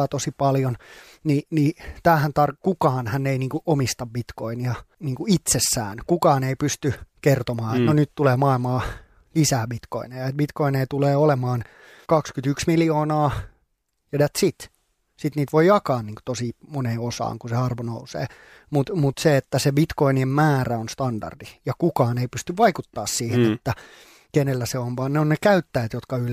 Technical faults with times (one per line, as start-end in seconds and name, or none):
21.71-24.30 sample clock jitter